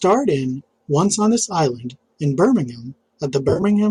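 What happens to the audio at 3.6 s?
At 3.6 s the stream is in the middle of an AAC frame loss with concealment, running from 3.49 to 3.63 s. About 80 ms of frames go missing, scattered over roughly 140 ms, with the longest unbroken gap around 30 ms. The decoder patches each hole by reusing the last good spectrum with randomised signs or interpolated energy. Because every gap is short, the speech doesn't fade to silence. Instead it turns briefly smeared, noisy and phasey in a quick, flickering patch.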